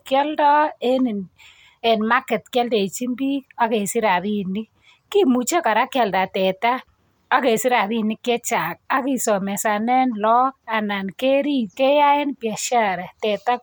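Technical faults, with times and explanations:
No technical faults detected.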